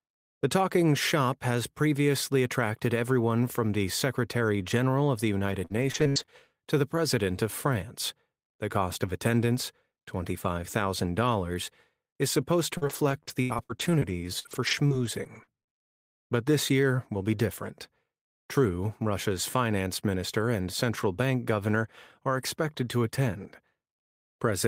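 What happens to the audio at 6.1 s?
Repeated packet loss (robotic sound) runs from 5.39 to 6.30 s, between "of the" and "to the". Five gaps, longest 65 ms, are patched by repeating prior sound, giving choppy speech with pieces missing. Smeared, repeated spectrogram slices and waveform discontinuities appear.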